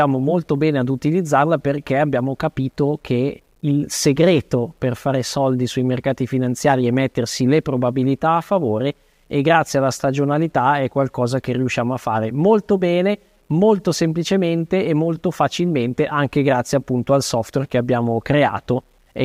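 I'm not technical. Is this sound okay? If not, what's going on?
No. All the way through, the speech has a fine, gritty roughness that rises and falls with the voice itself, and the quietest moments, such as the fading ends of sounds, turn grainy or sputter instead of fading smoothly. The likely cause is low bit depth without dither, with the sound stored at only about 10 bits and simply rounded. Ordinary background hiss stays steady, but this grit comes and goes with the speech.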